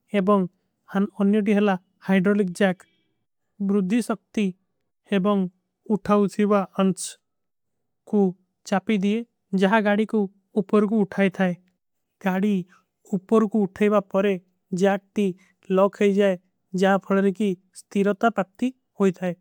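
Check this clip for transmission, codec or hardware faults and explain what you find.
One fault type appears twice: a drift correction step. From 6.06 to 6.99 s the speech slows by 5.3% and drops 95 cents. From 9.68 to 10.63 s it speeds up by 5.3% and rises 90 cents. Both times, speed and pitch move together and then snap back. The likely cause is clock-matching software briefly changing the playback rate to rebalance its buffer.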